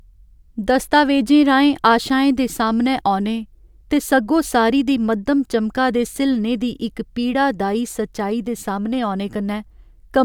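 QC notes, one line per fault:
Nothing to flag on this one, it's a clear pass with no faults to log.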